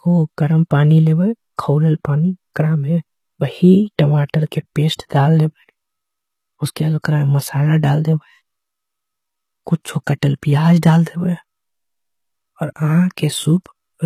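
From start to finish the speech carries what is likely HE-AAC compression: the treble sounds bright yet synthetic, with s sounds turning gritty and metallic, and nothing at all above 15 kHz. The upper band is being rebuilt from copied lower bands rather than coded, a sign of a very low bitrate, perhaps around 20 kbps. A plain low-pass would simply sound dull, and ordinary low-rate coding would sound muffled and swirly.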